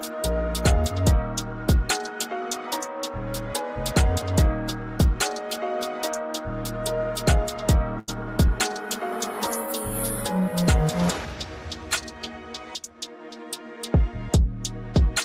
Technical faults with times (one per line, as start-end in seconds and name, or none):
7.99-8.10 short stall from a late packet
12.78-13.17 jitter buffer speed-up